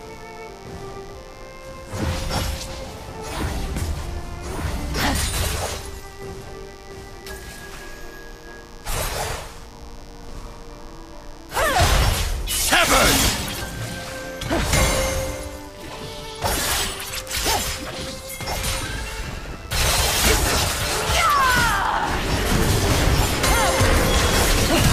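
From start to finish a mains buzz sits under the sound, roughly 25 dB below it, steady and raspy. Sharp switching spikes, of the kind a dimmer, rectifier or unshielded cable lets in, arrive twice in every 50 Hz cycle, so the buzz is built on a 100 Hz pulse with harmonics climbing into several kHz. That bright, edgy upper content sets it apart from plain hum, which stays a smooth, low tone near 50 Hz.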